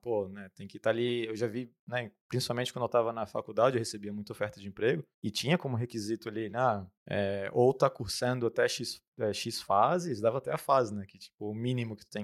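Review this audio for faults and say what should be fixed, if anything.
No faults can be heard anywhere in this speech recording. Nothing needs to be fixed or prevented.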